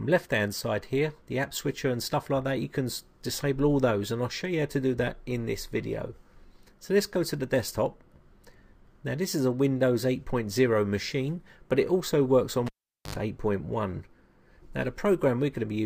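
At 12.67 s the cable is pulled and plugged in. A pop cuts the sound to near silence for about 0.44 s. As the plug goes back, a 76 ms burst of 50 Hz mains buzz leaks through. Another pop brings the sound back at 13.15 s.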